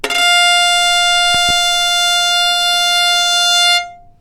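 Between 1.35 and 1.52 s, a loud pop comes twice, a few dB above the sound, likely a voltage pulse; on the waveform, two sharp spikes, on a spectrogram, vertical broadband lines.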